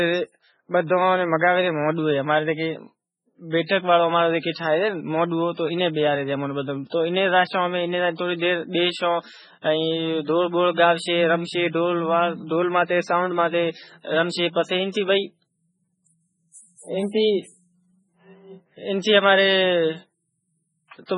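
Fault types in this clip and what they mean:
MP3 compression: The sound was likely squeezed through an MP3 encoder starved of bits, and the heavy damage points to a rate around 16 kbps. With so little data, the encoder discards all treble above 10.5 kHz and drops weak frequency lines that then flicker in and out between frames. The result is dull, watery, swirling speech throughout, with metallic chirping on sibilants and consonant onsets that lose their crispness.
pre-echo: The codec spreads its quantisation noise across each whole transform block, so when a sharp onset lands late in a block, noise scaled for the loud part leaks into the quiet just before it. Here that shows as a brief hiss ahead of attacks at 3.66, 4.39, 4.51, 10.74 and 19.01 s, each smeared forward by roughly 29 to 47 ms, making those onsets sound soft and blurred.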